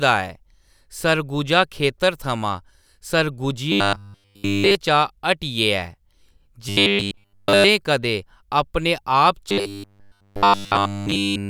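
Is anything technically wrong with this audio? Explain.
Yes. From 3.72 to 4.75 s, 6.69 to 7.64 s, and 9.50 s to the end, the speech turns into a rigid metallic buzz fixed at 100 Hz: robotic sound from repeated short buffers, likely caused by one 10 ms chunk being replayed over and over while the real audio is skipped.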